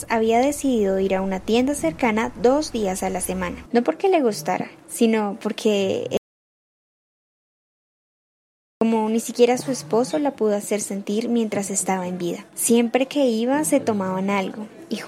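At 6.17 s the sound cuts out to silence, with no room tone, until 8.81 s: an audio dropout to silence losing 2.64 s, likely from a lost input link.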